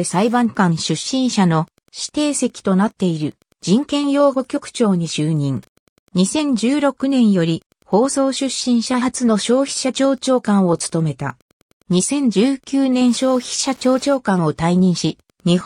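A faint, steady ticking about ten times a second runs throughout, well below the main sound. It is Wi-Fi interference: the circuit rectifies a nearby radio's beacon every 102.4 ms.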